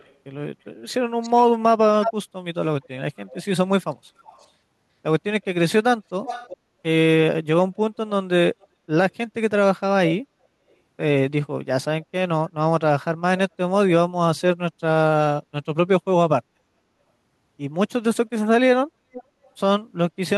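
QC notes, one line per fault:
0.00–0.15, 1.21–1.45, 2.02–2.13, 2.83–4.49, 6.25–6.57, 8.61–9.12, 10.70–10.74, 19.12–19.50 s, echo leak: delayed speech copies trail in, delay creeping from 333 to 448 ms, barely audible to nearly full level, likely a loudspeaker-side echo canceller letting pickup through.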